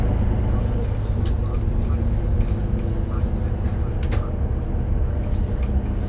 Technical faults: none

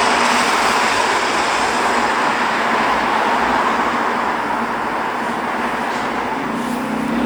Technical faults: none

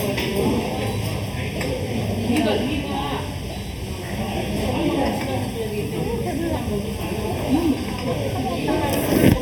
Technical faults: channel delay (comb filtering)

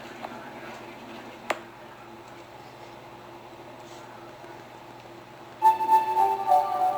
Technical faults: sample clock jitter; train of clicks

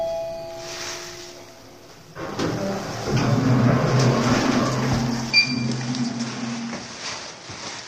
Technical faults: low-delay AAC compression; input switched to a poorer device

